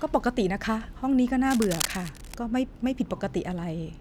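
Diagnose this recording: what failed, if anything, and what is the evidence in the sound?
Cable scratch noise from 1.47 to 2.35 s: dense, uneven rustling about 10 dB below the speech. Likely a worn analogue connector's shifting contact resistance.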